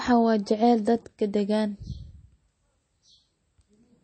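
Throughout the speech there is MP3 compression damage that is plainly audible, likely from a low-bitrate encode around 32 kbps. Nothing remains above about 8.4 kHz, so the treble is dull, and weak spectral lines dropping in and out give a watery, swirly texture with smeared consonant attacks.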